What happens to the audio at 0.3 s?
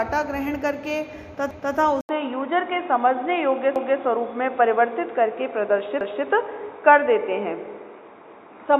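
Nothing goes wrong at 0.3 s; the audio carries on intact through that moment with no dropout, click or distortion.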